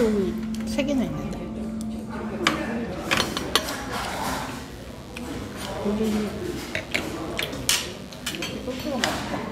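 From 3.4 to 9.0 s, mains buzz: 50 Hz supply spikes leak in twice per cycle, laying a steady, raspy buzz well beneath the sound.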